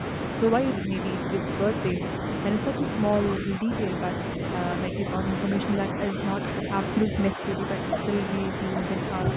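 Speech suppressed in double talk thins the speech in patches at 0.78–2.02, 2.8–3.88, 4.37–4.42, 4.9–5.05, 5.94–6.65 and 7.06–7.77 s. An echo canceller likely ducked both sides at once. The waveform envelope sags by about 5 dB, nearer 10 dB within 2.8–3.88 s.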